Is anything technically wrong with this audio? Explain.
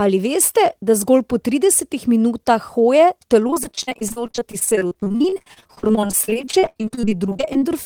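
Yes. From 3.47 s to 7.70 s there is repeated packet loss (robotic sound). Dozens of dropouts, the longest 63 ms, are each filled by stretching the previous audio, so about a third of that stretch is patched. The speech sounds choppy, with pieces missing. A spectrogram shows frozen, repeated harmonic blocks with abrupt edges, and the waveform shows recycled cycles with sudden breaks.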